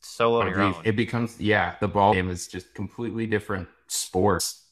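Damaged data in a compressed stream makes the decoder misread frames and lose sync until it finds the next frame header. In this speech it causes brief blips at 0.40–0.42 s before "oh your", at 2.12 s between "becomes yeah the" and "is just", and at 4.39 s.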